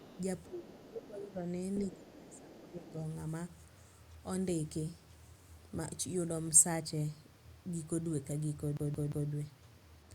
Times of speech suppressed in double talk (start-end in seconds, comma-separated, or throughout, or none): 0.48-1.48, 1.81-2.96